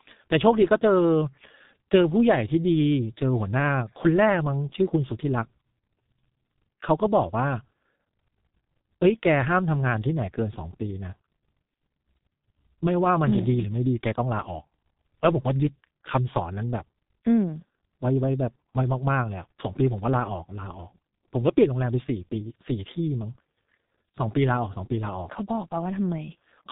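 Throughout, heavy G.723.1 codec damage removes everything above 3.8 kHz. Unlike simple low-pass filtering, its coarse, slow-updating frames also smear consonants and make the speech hoarse.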